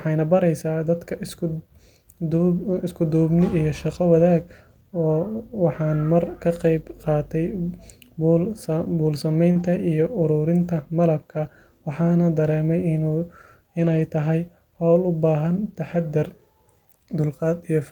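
At 2.69 to 2.75 s, packets went missing, but each following packet carried a low-bitrate spare copy, so this is a lost packet rebuilt from error correction. The decoder played those copies, leaving no gap, just 40 ms of audibly rougher, noisier speech, about what two lost packets would account for. The same repair recurs at 9.55 to 9.65 s, 60 ms of coarsened sound consistent with three packets, and at 13.79 to 14.01 s, where a longer 120 ms stretch, pointing to around six packets, turns grainy before clean audio resumes.

Overlapping the second repair, at 9.51 to 9.57 s, comes a short concealed packet loss. Here 40 ms of speech never arrived in time and had no spare copy, so the receiver extended the last sound, carrying on its pitch or shaping noise, then blended back into the real signal. The result is a brief smear or wobble just before the rough, rebuilt stretch that follows it.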